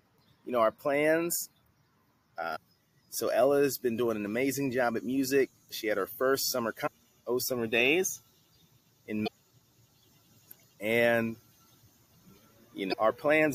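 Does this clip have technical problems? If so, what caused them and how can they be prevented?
Yes, there are four short blips of damaged data in a compressed stream, at 2.52–2.57, 6.83–6.88, 9.24–9.28 and 12.89–12.94 s, where corrupted bytes made the decoder lose sync and hunt for the next frame. To prevent this, deliver the file over a checksummed, error-checked transfer and verify it before decoding.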